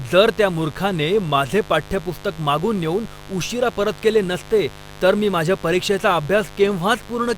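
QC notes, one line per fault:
Throughout, mains buzz: a steady, raspy buzz sits under the speech for the whole clip at roughly 20 dB below it, never varying with the talking. It is built on 50 Hz, with a dense stack of harmonics reaching up into several kHz. That bright edge comes from sharp switching spikes, arriving twice per mains cycle, leaking into the signal path through a dimmer, a rectifier or a missing shield.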